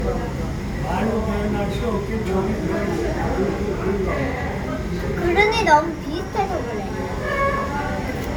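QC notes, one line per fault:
throughout, generation loss: likely about five MP3 re-encodes, each requantising on a shifted frame grid, so noise and spectral holes accumulate into swirly, hollow sound with blurred attacks.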